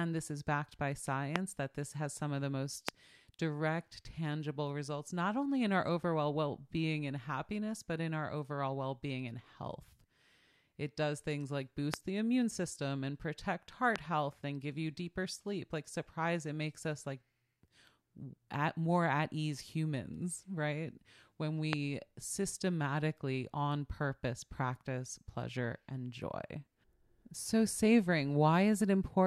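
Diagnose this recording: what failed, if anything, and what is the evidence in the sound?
A loud pop occurs five times in the speech, at 1.36, 2.89, 11.94, 13.96 and 21.73 s. Each is a single sharp click lasting about 20 ms that peaks roughly 25 dB above the speech (a little lower at 13.96 s), while the talking carries on underneath. The likely cause is an analogue-side voltage step, such as a loose connector, switch or static discharge, that is then shaped by the following circuitry. On a waveform each appears as a tall isolated spike, and on a spectrogram as a thin vertical broadband stripe.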